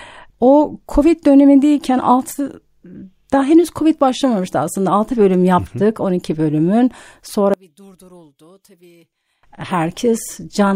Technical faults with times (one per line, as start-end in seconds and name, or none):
7.54-9.43 one channel inverted